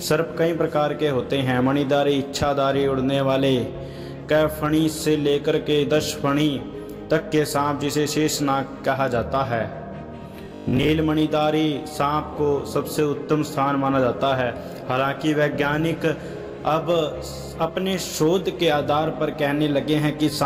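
From 10.45 to 10.89 s the sound turns into a rigid metallic buzz near 50 Hz: robotic sound, likely from 20 ms buffers repeating for about half that stretch.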